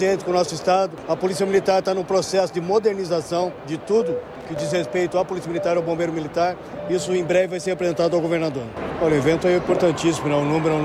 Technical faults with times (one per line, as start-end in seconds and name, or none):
4.35-4.59 loose connector crackle